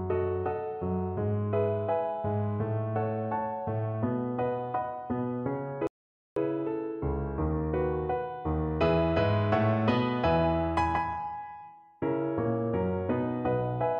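The player ran out of downloaded audio, a rebuffering stall, so the sound drops to silence from 5.87 to 6.37 s, then resumes exactly where it stopped, adding 0.49 s.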